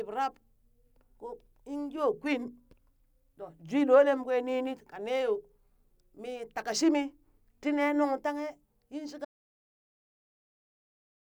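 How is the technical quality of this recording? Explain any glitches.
The recording has one clear glitch: an audio dropout to silence at 9.25 s, right after "tanghe yin", that lasts to the end of the clip. The speech stops abruptly mid-flow and is replaced by dead digital silence with no room tone, so whatever followed is lost. The likely cause is the input being cut off, through a disconnected device, failed link or accidental mute, while the recorder kept writing silence. On a waveform the trace drops to a flat line. On a spectrogram the last two seconds are completely blank.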